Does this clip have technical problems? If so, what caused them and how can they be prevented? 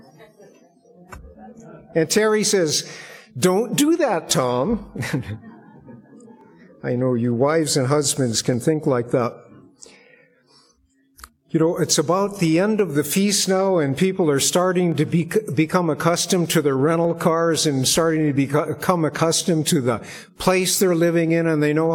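Yes. From 2.16 s to 21.29 s there's a click every 2.12 s, about ten in all, which points to clock drift buffer slips. Two devices are likely running on separate clocks that disagree by roughly 150 ppm, so the buffer between them periodically drops or repeats a block of around 15 samples. Locking both devices to a shared word clock, or putting an asynchronous sample-rate converter between them, would stop it.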